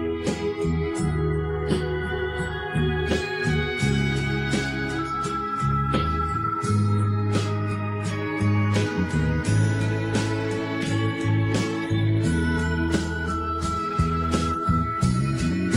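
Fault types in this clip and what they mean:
No dropouts, distortion, noise bursts or timing errors are audible anywhere in the clip.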